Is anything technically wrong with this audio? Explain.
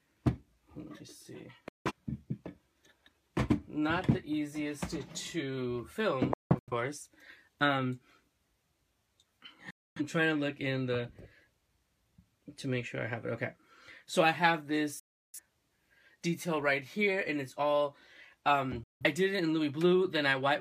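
Yes. Digital broadcast dropout occurs at 1.68–1.92 s, 6.33–6.73 s, 9.70–10.01 s, 14.99–15.39 s and 18.83–19.05 s. The receiver lost valid frames and muted, cutting the sound within about 3 ms. Each gap lasts about 0.17–0.34 s, and at 6.33 s it breaks into several short holes.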